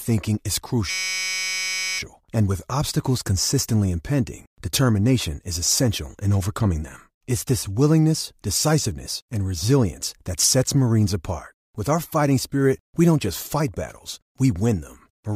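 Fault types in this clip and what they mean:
System hang loop: the machine stalled while the audio hardware kept replaying one 5.33 ms chunk, which fits a 256-sample buffer, so from 0.90 to 1.99 s you get a steady 188 Hz buzz before "and with obstacles consistently" picks up again.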